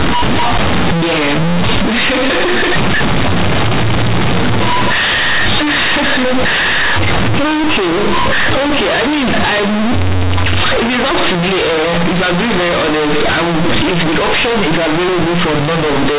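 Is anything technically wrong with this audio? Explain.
Yes. Throughout the speech, companded audio is read as linear: mu-law G.711 bytes play as raw 8-bit samples, producing loud buzzy distortion, noisy pauses, and a flattened, clipped-looking waveform with broadband spectrogram smear.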